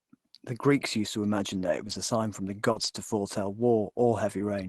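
Between 1.59 and 1.93 s, after "used to imagine" and before "a sign from the", a run of lost packets is rebuilt from error correction. Each missing packet was replaced by the low-bitrate copy carried in the next one, so there's no gap. The passage turns rougher and noisier but keeps its real content, which sets it apart from concealment.

At 2.71 to 2.77 s, after "a sign from the" and before "to foretell", there is a short concealed packet loss. About 40 ms never arrived, and the receiver filled it by extending the preceding sound, giving a brief smear or wobble rather than coarsened real audio. Error-correction copies then take over from 2.75 to 2.85 s, adding another short stretch of that rough, noisy texture before the Opus call path returns to its normal coding.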